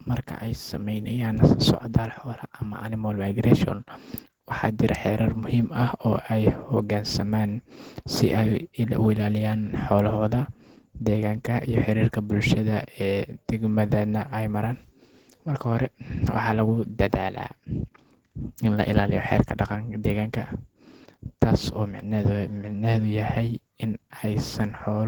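Opus voice compression runs throughout the clip, with plainly audible damage that fits a rate near 16 kbps. In hybrid mode, linear prediction codes the speech below 8 kHz on a coarse excitation, which makes the speech hoarse and slightly robotic. A thinly coded layer supplies the fullband top.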